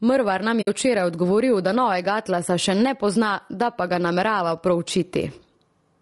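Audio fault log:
throughout, gain pumping: gain likely set far too high with a fast limiter clamping each loud sound, so the gain swings roughly 15 dB and loud and soft parts end up squashed closer in level.
throughout, low-delay AAC compression: short low-delay frames at 32 kbps, likely AAC-ELD, resolve pitch harmonics poorly, leaving the voice rough and grainy with noise between harmonics and a lowered or synthetic top band.
0.61–0.68 s, AAC frame loss with muting: about 60 ms of lost frames decoded as silence, and overlapping windows fade the sound out and back in, leaving a soft-edged hole.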